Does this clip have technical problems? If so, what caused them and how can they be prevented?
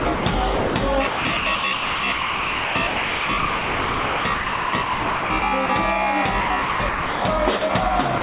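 Yes. Sound chopped by the voice detector at 0.0–0.26 s, 1.07–5.69 s and 6.41–7.22 s: the sender's detector likely kept toggling, swapping stretches of sound for comfort noise that shows on a spectrogram as smooth, featureless patches. Relaxing the detector's threshold or lengthening its hangover time would prevent this.

Sound dropped by the voice detector at 0.56–0.74 s, 7.6 s and 8.2 s: sound was likely mistaken for background and replaced by steady noise, appearing as a flat, low-level strip in the waveform. Disabling silence suppression on the sending side would prevent this.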